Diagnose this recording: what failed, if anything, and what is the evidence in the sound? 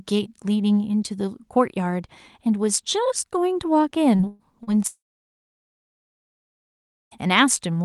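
Short concealed packet loss at 4.15–4.22 s and again at 4.63–4.70 s is a network-stage fault. Each time, about 40 ms of speech failed to arrive, and the receiver bridged the hole by extending the preceding sound for roughly 37–38 ms before crossfading back. The result is a brief smear or wobble rather than a clean gap. It sits over a band-limited call signal that tops out near 12 kHz, consistent with Opus.

A burst of packet loss runs from 4.27 to 4.42 s. Here about 120 ms went missing in a row, and the concealment stretched the last sound across the whole span without dropping to silence. It is heard as a held buzz or a hiss that tails off in level. Speech then picks up further along, with the intervening 120 ms simply gone. This is several consecutive lost or late packets, not a brief hiccup.

A long network dropout spans 4.87 to 7.14 s. The last sound is extended and fades over roughly the first tenth of a second, and then about 2.14 s of near-silence follows before speech resumes, with roughly 2.24 s of content never played. 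The likely cause is a total interruption of packet delivery, leaving the jitter buffer empty until the stream recovers.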